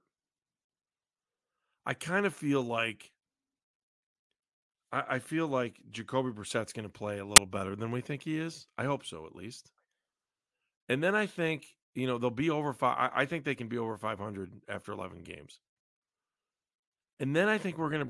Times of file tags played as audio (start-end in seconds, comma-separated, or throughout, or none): 7.36